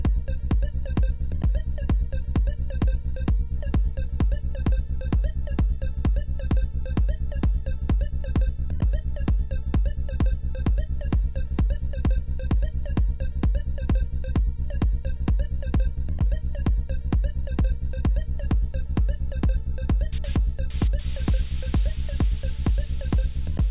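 No technical faults can be heard anywhere in the audio; the signal stays continuous and stable for its whole duration.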